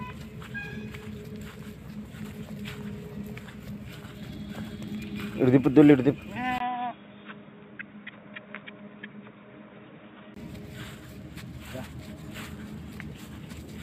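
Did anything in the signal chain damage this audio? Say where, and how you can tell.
Yes, at the driver stage. From 6.58 s to 10.36 s, after a 20 ms gap, the sound turns boxy, with nothing above 3.8 kHz, about 5 dB quieter, and a new noise floor around 30 dB down. The input likely switched to a poorer device, then back.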